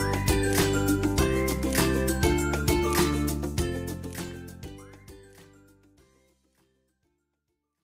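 There are no technical faults to describe in this clip.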